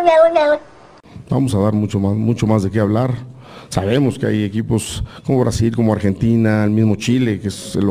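Nothing is technically wrong with the clip.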